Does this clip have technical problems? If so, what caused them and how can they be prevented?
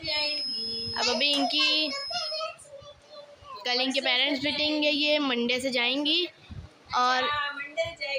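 Yes. A feedback whistle runs from 0.0 to 2.48 s. It is a thin, steady 5.1 kHz tone, a little below the main sound, swelling and fading slowly in level. The likely cause is a loudspeaker-to-microphone loop held just at the edge of feedback, ringing without building up. To prevent it, lower the monitor gain, keep the microphone away from loudspeakers, or notch out 5.1 kHz.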